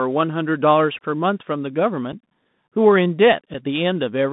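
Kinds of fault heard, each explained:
Bluetooth CVSD headset codec: Speech sounds narrow and muffled, held to 150 Hz to 3.7 kHz, with scratchy s sounds, a granular hiss underneath and distortion on loud, bright moments. The narrowband headset codec sends one up-or-down bit per sample, and its adaptive step lags fast, loud changes.
Unconcealed Bluetooth headset packet loss: Two brief, hard-edged holes at 2.12 s and 3.54 s, each 7.5 ms long, with speech resuming quieter for a moment. Each fits a single voice packet lost between headset and phone and filled with silence or an idle pattern instead of being concealed.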